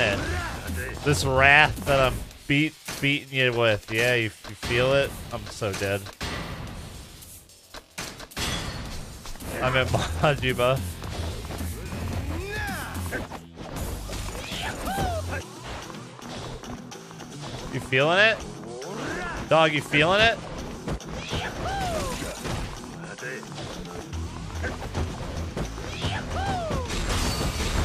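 A sharp click at 21.72 s is likely dropped samples: under a millisecond goes missing, so the waveform jumps, leaving a thin vertical spectrogram line.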